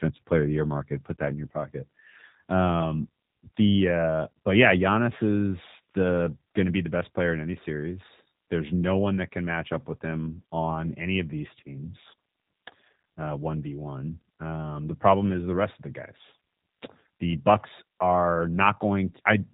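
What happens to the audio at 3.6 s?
At 3.6 s the speech carries G.729 codec damage, present throughout the clip rather than starting there. The coder rebuilds each 10 ms frame from a vocal tract filter, a pitch predictor and a few pulses, at a rate that fits 8 kbit/s. Nothing above 3.8 kHz survives, and the voice sounds plainly rough and synthetic. A simple low-pass filter would dull the top end just as much but leave the remaining band clean and natural.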